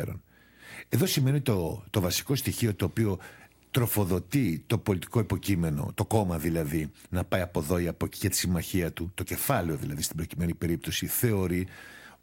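A low buzz at 59.94 Hz with hash above it and a faint 15.7 kHz whine runs throughout, well below the speech: video or display buzz from a coupled screen or cable.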